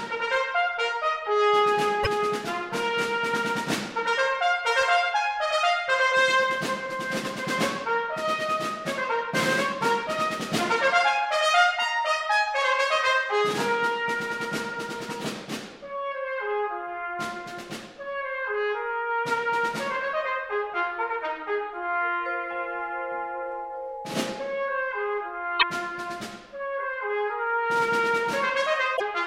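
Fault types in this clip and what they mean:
Damaged data in a compressed stream: a stretch of the encoded bitstream is corrupted, so the decoder misreads the affected frames, loses sync and must search for the next valid frame header before playback recovers. Here it is heard as three short glitches, each a brief chirp or blip lasting about 70 to 85 ms, at 2.00 to 2.07 s, 25.56 to 25.63 s and 28.93 to 29.02 s.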